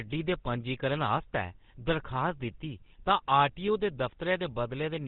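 GSM full-rate codec coding runs through the whole speech clip. The codec rebuilds the voice from a short-term vocal-tract filter fed by a coarse, regularly spaced pulse train. Much of the excitation detail is thrown away, which fits the 13 kbps GSM full-rate scheme, and nothing above 4 kHz survives. The damage is plainly audible: a dull, band-limited sound with a buzzy, gravelly grain riding on every voiced stretch.

GSM bit errors strike from 1.17 to 1.23 s, right after "दे पंजीकरण". Corrupted bits reached the decoder, so the filter, pitch and gain parameters it used were wrong for a few consecutive frames. The sound points to roughly three damaged frames at an error rate of around one to two percent. The result is a brief squawking, gargled burst, with the spectrum bent out of shape and the level jumping before the decoding settles.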